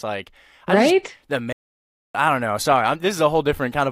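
At about 1.53 s the speech just drops out, and nothing comes back until about 2.15 s, so there's roughly 620 ms of dead air right in mid-flow. That's a playback stall: the player most likely ran dry of buffered data, or its audio thread got held up, and the output sat silent until it caught up. When the sound resumes, the break in mid-flow makes the gap feel like a hiccup, not a natural pause.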